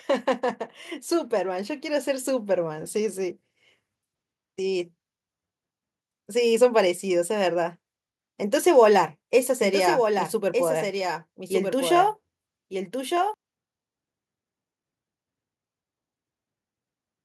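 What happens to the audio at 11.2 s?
A slower path likely mixes the speech in twice from 9.6 to 13.34 s, a doubled audio track: a dry copy trails about a second behind, about 5 dB quieter.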